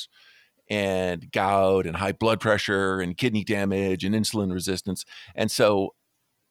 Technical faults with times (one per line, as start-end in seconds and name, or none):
none